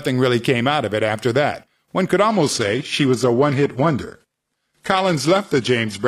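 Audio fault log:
2.31 to 6.07 s, adaptive stream at a lower bitrate: the speech abruptly turns duller with no gap, with nothing above 12.3 kHz and coarser codec artefacts. A slowed connection pushed playback onto a much leaner encoding, which fits a switch from 96 kbit/s AAC to 16 kbit/s HE-AAC.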